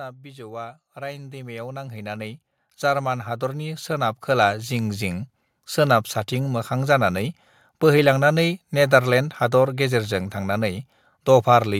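From about 0.21 s to 5.07 s you can hear automatic gain rising: the AGC decided the input was too quiet and kept pushing its gain up, ending roughly 18 dB louder than where it started. Because it's turning up the whole signal, the speech and the background noise swell together, so the room seems to creep closer over those five seconds rather than the talker simply getting louder.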